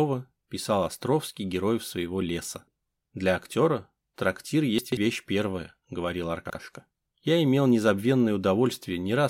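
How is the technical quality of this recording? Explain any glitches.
The recording has two brief glitches, both chunks out of order. At 4.78 to 4.97 s, a roughly 46 ms block plays three blocks late. At 6.46 to 6.55 s, another plays one block late. Nothing is missing, unlike a dropout, which leaves a gap. Instead the audio jumps at hard joins, so each spot sounds briefly jumbled rather than silent.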